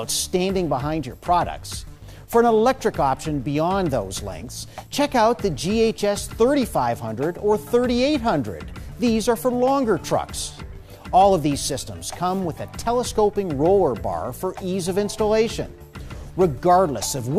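No technical fault can be heard anywhere in the signal.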